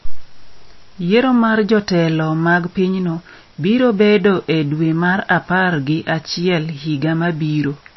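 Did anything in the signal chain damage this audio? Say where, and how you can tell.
Yes. The damage most likely happened at the codec stage, in low-bitrate MP3 compression. Throughout the speech, nothing above 5.8 kHz remains, and the sound is plainly watery and swirly, with smeared attacks. This points to an encoder starved of bits, near 26 kbps, cutting the treble and dropping weak frequency lines frame by frame.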